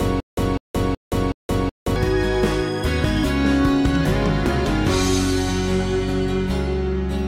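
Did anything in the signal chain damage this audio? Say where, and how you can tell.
Yes. A stutter with silent gaps is already under way when the clip opens and runs to 1.96 s. The same burst of about 0.2 s repeats four times at an even 0.37 s period, each followed by about 0.17 s of digital silence. This points to the playback or streaming buffer, most likely a stalled stream that replayed its last fragment on each retry and then ran dry. The audio that belonged in those gaps is lost.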